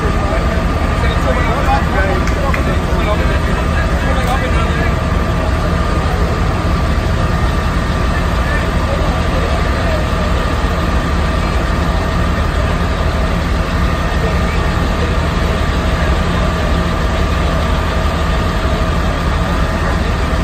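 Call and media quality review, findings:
Chunks out of order at 18.1 s: one 5.33 ms chunk plays a chunk late, giving a brief jumbled moment with hard joins; points to buffer reordering.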